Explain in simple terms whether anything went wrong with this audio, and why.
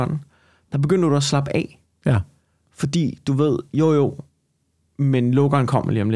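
Nothing went wrong with this speech recording that a careful listener would pick up. There is no technical fault to point to at any moment in it.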